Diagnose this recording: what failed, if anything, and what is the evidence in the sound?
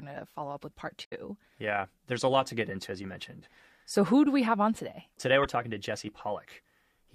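The codec stage failed: damaged data in a compressed stream. The speech breaks up briefly from 1.01 to 1.13 s and again from 5.43 to 5.46 s. Corrupt bytes there made the decoder misread frames, lose sync and hunt for the next header.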